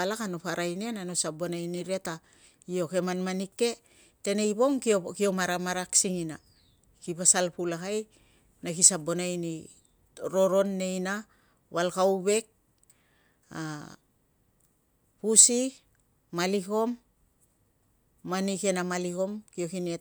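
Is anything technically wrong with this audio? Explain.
No, nothing stood out as technically wrong on listening to this speech recording.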